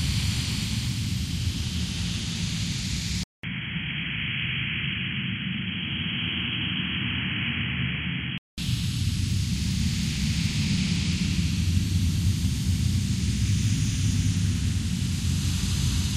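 At 3.23 s the sound drops out for 200 ms. It returns dull and boxy, with nothing above 3.3 kHz. It is a few decibels quieter, over faint new background noise. Full bandwidth comes back at 8.58 s. The likely cause is an input switched to a poorer device.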